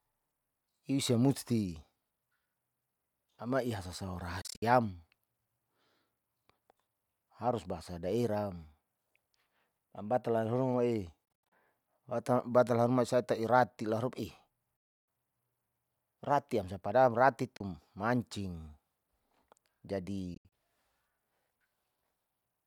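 Speech cuts out at 4.41, 11.25, 14.77, 17.57 and 20.34 s, likely a Bluetooth dropout: late packets were discarded, leaving abrupt silences, some scattered into bursts, the longest about 0.3 s. Waveform and spectrogram show sharp-edged blank columns, and the audio resumes as if it had played on.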